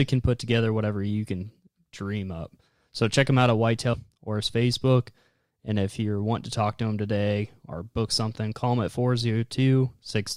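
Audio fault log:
3.93–3.97 s, stream segment skipped: speech jumps ahead with a short blip instead of pausing and resuming, likely because one segment failed to load and playback continued from the next.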